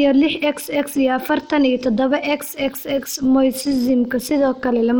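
From start to finish the speech carries plainly audible Bluetooth SBC compression, likely from a starved bit pool, consistent with roughly 96 kbps. Treble drops out or flickers under gritty quantisation noise and aliasing.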